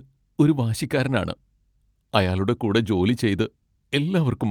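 Speech recording with no audible technical faults at any point.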